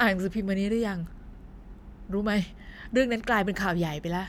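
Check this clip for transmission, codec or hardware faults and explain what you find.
Nothing in the speech signal points to a transmission, codec or hardware fault.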